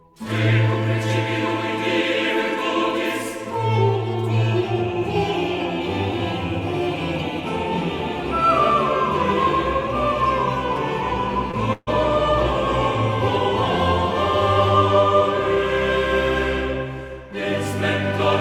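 At 11.51 to 11.55 s, a short concealed packet loss occurs. About 20 ms never arrived, and the receiver continued the previous sound, leaving a brief smear.

At 11.73 to 11.89 s comes a burst of packet loss. About 140 ms went missing, and the receiver stretched and faded the last sound, ending in a short silence.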